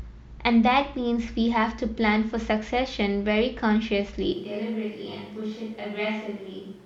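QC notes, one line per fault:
4.33 s to end, switch to a distant microphone: the speech turns suddenly roomy and hollow, thinner in the bass, about 5 dB quieter, with background noise now only roughly 25 dB down, likely a farther pickup replacing the close one; added reverb or EQ wouldn't raise the noise floor.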